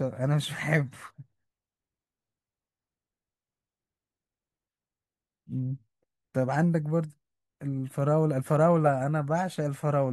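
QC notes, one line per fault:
No faults heard in this speech recording; nothing to log.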